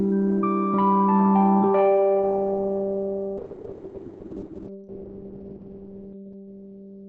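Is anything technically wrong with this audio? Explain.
Yes. From 3.38 s onward the audio turns muffled and rough. A call bitrate drop from 32 to 9 kbps forced coarser coding and cut the bandwidth from 20 kHz to 4 kHz.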